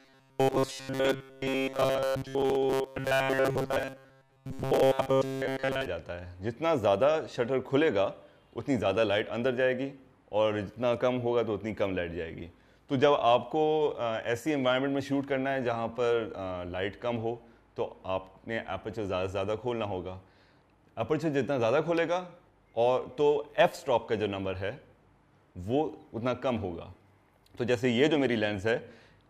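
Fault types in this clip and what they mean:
Robotic sound from repeated short buffers: From 0.01 to 5.86 s the sound turns into a rigid, metallic buzz at 134 Hz that loosely tracks the audio. The likely cause is audio arriving too seldom, with segments of about 7.5 ms repeated for roughly seven tenths of that stretch.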